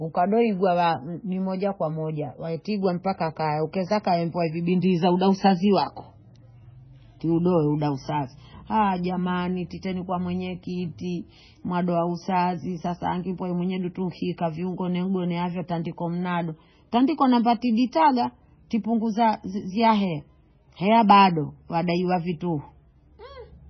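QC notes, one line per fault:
Throughout, MP3 compression, likely at a very low bitrate, something like 16 kbps. Nothing comes through above 6 kHz, so the speech sounds dull, and the heavy damage leaves it watery and swirly as weak frequency lines flicker on and off between frames.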